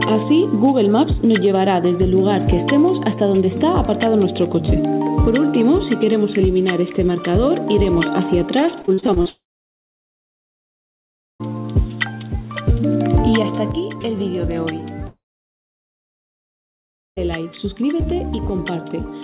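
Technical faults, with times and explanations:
8.82–9.28 s, repeated packet loss (robotic sound): seven short holes, the longest 41 ms, break the sound in quick succession. Each is filled by stretching the previous fragment. About 39% of this span is patched, so it turns choppy and robotic.
9.30–11.42 s and 15.08–17.19 s, long network dropout: each time about 2.1 s of audio goes missing. A brief buzzy continuation of the last sound fades out. Roughly two seconds of silence follows. The sound then resumes with that stretch simply gone. A stall in the network is the likely cause.
13.72 s to the end, sudden gain jump: the level drops abruptly by about 6 dB between one sample and the next. Sound and background fall together, with no fade. This likely comes from a gain change or bit shift applied without a ramp.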